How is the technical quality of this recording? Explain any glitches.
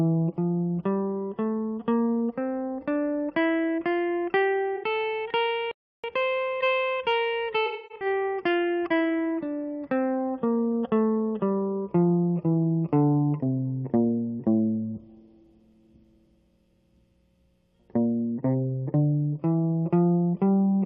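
The music has four glitches between about 4.8 and 9 seconds.

At 4.76 to 4.84 s, AAC frame loss with concealment: about 64 ms of coded data went missing, and the decoder rebuilt it from the preceding spectrum, leaving a brief smeared, phasey patch.

At 5.71 s a playback stall, likely from the player running out of data, silences the music for about 0.32 s before it resumes where it stopped.

From 6.04 to 9.04 s, time-compressed catch-up: the player trims small pieces of its backlog and cross-fades them, so the music runs about 1.1 times fast at unchanged pitch.

From 7.66 to 8.06 s, more AAC frame loss with concealment: scattered losses totalling about 256 ms, the longest around a tenth of a second, are patched from earlier spectra, leaving a noisy, smeared stretch.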